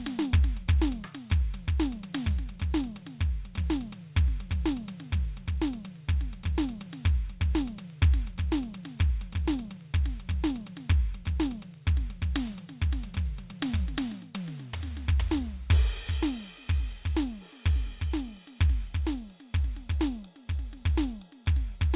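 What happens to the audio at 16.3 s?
Nothing goes wrong at 16.3 s: the music plays through that moment intact, with no dropout, click, glitch or other audible fault.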